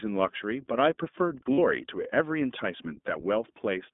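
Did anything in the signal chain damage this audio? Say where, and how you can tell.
Yes. The whole speech clip sounds narrow and slightly rough and synthetic, with nothing below about 200 Hz or above 3.6 kHz. That points to the codec stage: the iLBC codec, likely in its 15.2 kbps mode with 20 ms frames, codes each frame's excitation independently and plainly coarsens the voice.

From 1.55 to 1.59 s the voice briefly turns into a held, faintly buzzy vowel, then snaps back almost at once. This is lost iLBC frames on the network. About 40 ms went missing, which fits two 20 ms packets, and the decoder filled the gap by repeating the last pitch cycle mixed with noise.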